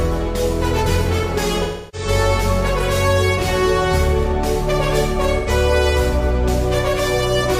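AAC frame loss with concealment: frames dropped at 1.63–2.08 s (about 0.3 s) and 5.38–5.49 s, so the decoder patched the gaps with smeared, noisy, phasey sound.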